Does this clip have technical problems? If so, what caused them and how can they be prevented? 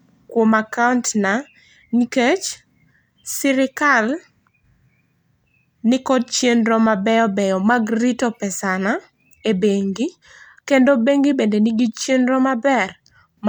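No, nothing in this recording points to a technical fault. There is nothing to trace to a cause and nothing to prevent.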